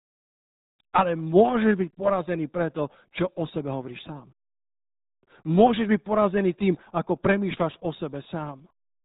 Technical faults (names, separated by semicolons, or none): RealAudio 14.4 codec